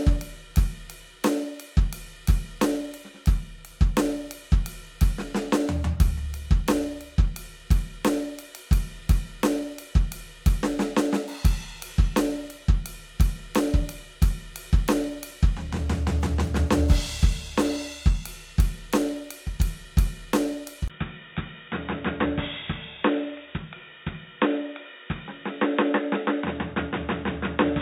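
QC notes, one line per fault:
20.88–27.81 s, input switched to a poorer device: after a 20 ms gap the music turns dull and boxy, losing everything above 3.8 kHz, dropping around 5 dB and gaining a faint new noise floor, likely a lower-grade microphone. Spectrogram: hard ceiling at 3.8 kHz. Waveform: brief flat gap, then smaller envelope.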